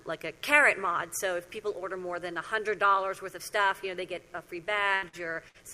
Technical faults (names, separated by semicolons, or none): mains buzz; repeated packet loss (robotic sound)